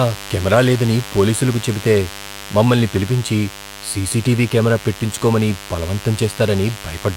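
Mains buzz runs through the whole clip, sitting around 15 dB below the speech. Sharp switching spikes at twice each 50 Hz cycle have leaked into the signal path, spreading harmonics of 50 Hz up into the kilohertz range and producing a steady, raspy buzz beneath the speech.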